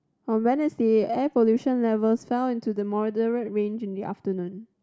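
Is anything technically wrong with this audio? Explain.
No, nothing technically wrong can be heard here.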